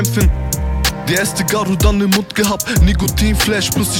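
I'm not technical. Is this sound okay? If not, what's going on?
Yes, it sounds fine.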